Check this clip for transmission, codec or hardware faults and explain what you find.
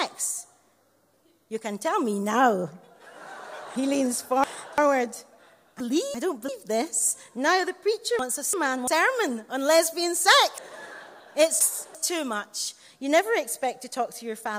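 There is one transmission fault, chunks out of order, occurring four times: 3.76–4.78 s, 5.80–6.49 s, 8.19–8.88 s and 10.58–11.95 s. Blocks of about 341 ms arrive late by two, one, one and three chunks respectively and play after their successors, jumbling the sound. Waveform and spectrogram show abrupt vertical discontinuities where mismatched blocks butt together.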